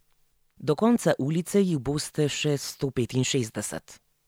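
Nothing is technically wrong with this speech clip.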